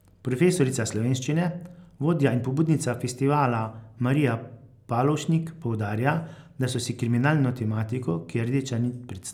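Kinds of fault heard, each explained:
No kinds of fault are heard in this speech.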